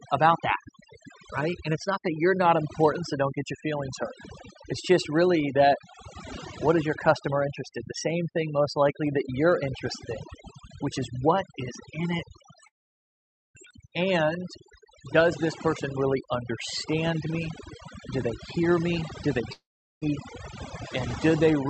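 Overdone noise removal runs through the whole clip. The suppressor pulls individual frequency bands down hard wherever they sit close to its noise estimate, so quiet parts of the speech vanish with the noise. The background drops and breaks up into twinkling specks.

A long network dropout is the likely cause of the gap from 12.67 to 13.57 s. About 0.88 s of audio never arrives, and after a fading fill the sound sits silent for about 0.85 s. A shorter dropout, likely from the same cause, at 19.53 to 20.04 s loses 0.5 s, with about 0.4 s of silence, before the speech resumes further on.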